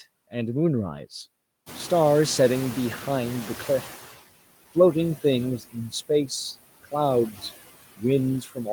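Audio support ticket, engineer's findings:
Background pumps throughout, sinking in gaps and swelling under speech. Component: noise suppressor artifacts. The suppressor gates each band frame by frame, pulling steady noise down about 18 dB.

Room noise jumps by about 18 dB at roughly 1.5 s and sits about 16 dB under speech. From 1.66 to 4.18 s it comes through too loud, then settles. Component: noise suppressor catching up. Its noise estimate took 2.52 s to follow the step, reaching only about 13 dB of reduction.

Speech briefly ducks and goes faint, with soft sounds and endings swallowed, at 5.59 to 6.1 s (dip of about 19 dB), 7.32 to 7.43 s (about 10 dB) and 8.41 to 8.67 s (about 13 dB). Each dip lasts roughly a tenth to a fifth of a second. Component: speech cut by the noise suppressor. Quiet speech energy was classed as noise and attenuated along with the background.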